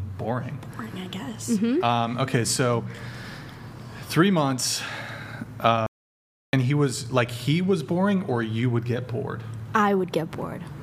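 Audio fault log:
5.86–6.53 s, audio dropout to silence: the sound cuts off abruptly and returns after about 0.67 s of silence, with no room tone underneath, so whatever occurred in that stretch is simply missing. This likely comes from the input being lost while the recorder kept writing silence.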